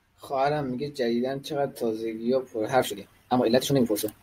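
From 2.73 s to the end, the speech abruptly rushes at double pace, unchanged in pitch: a time-stretched section, likely squeezed by dropping short pieces.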